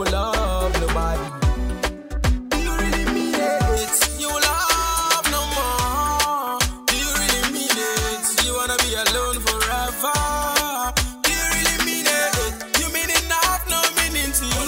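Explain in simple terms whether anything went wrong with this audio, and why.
From about 3.77 s to the end, there's pre-emphasis left on: the treble boost was never undone, so everything turns thin, bright and hissy.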